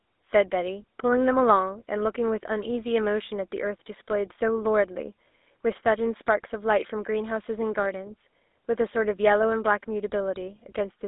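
From start to finish, the speech passes through a GSM full-rate codec, which fits a 13 kbps channel. The band runs only from 250 Hz to 3.7 kHz. Regular-pulse excitation adds a plainly audible buzzy, gravelly roughness throughout.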